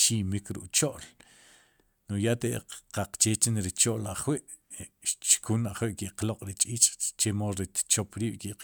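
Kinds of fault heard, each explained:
No technical faults are audible.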